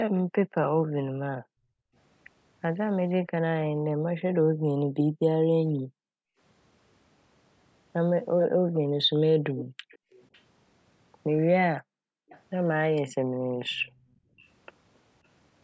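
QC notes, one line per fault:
0.17–0.21 s, 8.39–10.41 s, 12.29–12.41 s, 13.65–13.89 s: echo leak. A faint delayed copy of the speech trails about 0.44–0.54 s behind, well below the voice. This is likely loudspeaker pickup that the echo canceller left behind.
0.23–1.94 s, 3.31–6.39 s, 8.48–10.11 s, 11.78–14.45 s: background gated by the echo canceller. Room sound drops by up to about 40 dB for a total of roughly 0.7–1.5 s in each span, then returns. The canceller clamped the microphone while the far end played.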